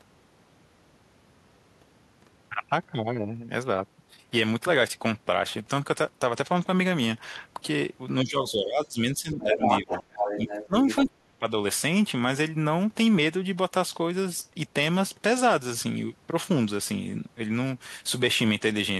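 From 8.24 to 9.01 s and again from 9.17 to 10.15 s, the talker drops by roughly 15 dB. This is speech suppressed in double talk, likely the echo canceller turning down both sides when it could not separate them. From 10.67 to 10.75 s there is a brief dip of around 20 dB, and from 11.02 to 11.44 s the speech is cut almost entirely, by around 40 dB. Between 9.41 and 11.1 s, the other side's voice leaks through at roughly the same level as the talker, likely left behind by incomplete echo cancellation.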